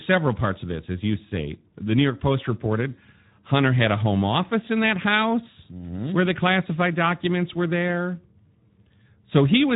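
From start to end the speech carries plainly audible coding damage, a grainy, hoarse texture, with nothing above 3.8 kHz. This is Speex codec compression: its CELP model gets too few bits for the excitation, at a rate that points to about 11 kbps.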